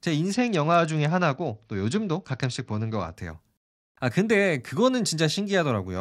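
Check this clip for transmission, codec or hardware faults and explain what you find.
One transmission fault is present. From 0.32 to 3.17 s, a Bluetooth SBC bit pool drop: the congested link starved the codec, consistent with a fall to about 78 kbps, so speech turns dull and gritty. Unlike plain band-limiting, coarse quantisation adds rough noise.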